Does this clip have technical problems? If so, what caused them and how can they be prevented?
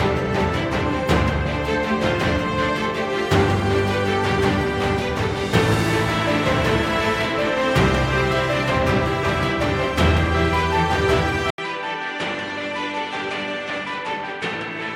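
Yes. At 11.5 s the sound changes abruptly and stays changed to the end. A gap of about 80 ms comes first. Then nothing is left above 10.5 kHz, the level falls by about 10 dB, and a faint new noise floor appears well below the signal. The likely cause is an input switched to a poorer device in mid-recording, with a narrower band and its own level and noise. To prevent it, lock the input device before recording and disable automatic switching.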